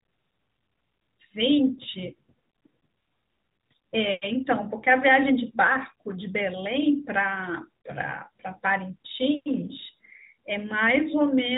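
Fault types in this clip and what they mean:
No faults to report; the speech carries no audible dropouts, clicks or level problems.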